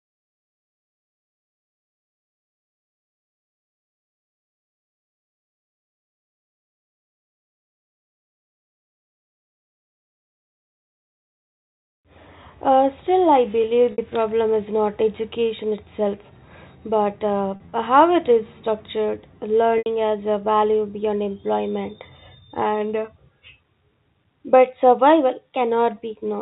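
Packet loss with pitch repetition occurs at 13.92–13.98 s, 17.56–17.72 s and 19.78–19.86 s in telephone-band speech. The receiver repeats the last pitch period to bridge the lost 60 to 80 ms of each event, fading it out over about 50 ms, and the speech returns with a short cross-fade. The second loss is scattered in short runs.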